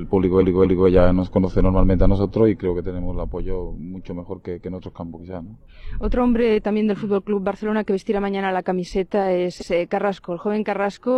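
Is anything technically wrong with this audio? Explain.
Yes. Repeated frames occur twice. From 0.38 to 0.84 s, a 232 ms block of compressed frames plays twice more, adding 464 ms. It sounds like a stutter. At 9.57 to 9.67 s, a 93 ms block repeats once, giving a brief second stutter.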